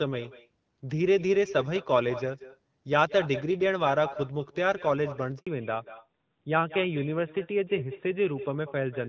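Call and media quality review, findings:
Echo with no canceller, throughout. Every phrase is shadowed by a quieter, thinner copy about 13 dB down, trailing by around a fifth of a second. The far-end loudspeaker feeds its microphone and nothing subtracts it, so the sound returns after the network round trip. Spectrogram: each speech burst is repeated as a fainter, time-shifted ghost. Waveform: small secondary envelopes trailing each main one.

Handover gap, 5.39 to 5.47 s. An 80 ms dropout where the sound dies within a few tens of milliseconds and goes silent. Probable component is the radio link switching networks, with no speech frames delivered during the transfer, so that stretch is lost. Waveform: a flat silent notch. Spectrogram: a clean vertical blank column across all frequencies.

Fallback to narrowband, 5.47 s to end. Straight after the gap, the sound turns duller and rougher, and everything above 4 kHz is gone. 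Before this, the top extended toward 7 kHz, consistent with AMR-WB at 12.65 kbit/s. After it, the sound points to AMR-NB at 12.2 kbit/s. Spectrogram: the upper band cuts off sharply at the gap, leaving a hard ceiling at 4 kHz.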